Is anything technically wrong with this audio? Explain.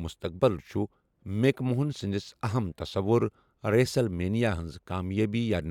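No, nothing technically wrong can be heard in this speech recording; the signal stays steady and intact throughout.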